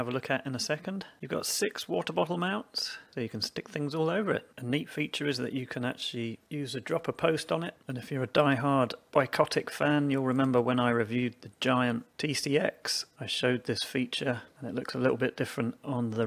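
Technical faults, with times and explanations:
Nothing stood out as a technical problem on listening.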